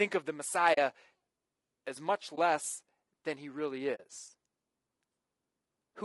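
Throughout this speech clip the sound is rough and grainy, with noise filling the gaps between harmonics and a thin, synthetic top band. That points to low-delay AAC compression, likely AAC-ELD at a low rate, which fits about 32 kbps, where short frames resolve pitch poorly. Two soft-edged holes open at 0.73–0.78 s and 3.95–4.00 s, about 40 ms each, and a brief dip at 2.35–2.38 s, about 20 ms long. This is AAC frame loss with muting: the decoder zeroes the missing frames, and the overlapping windows fade the sound out and back in.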